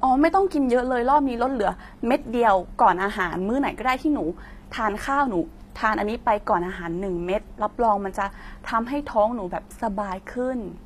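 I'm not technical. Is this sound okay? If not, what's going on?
No. Throughout, the s sounds come out gritty and lispy, with a metallic sheen on top, likely from HE-AAC compression rebuilding the treble artificially.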